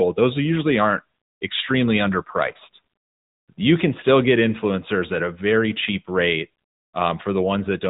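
This speech clip runs through the AMR narrowband mobile codec throughout, with nothing above 3.8 kHz and plainly audible synthetic coding damage, consistent with a roughly 10.2 kbps mode.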